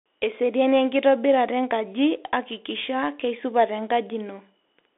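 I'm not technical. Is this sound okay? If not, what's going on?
No. From start to finish this speech went through a Bluetooth CVSD headset codec, the basic phone-call link many wireless headsets use. It squeezes the sound into a narrow band, roughly 300 Hz to 3.5 kHz, and discards everything above about 3.7 kHz, so the voice sounds thin and muffled, like an old phone line. Its rough way of following the waveform adds a grainy hiss and makes s sounds scratchy.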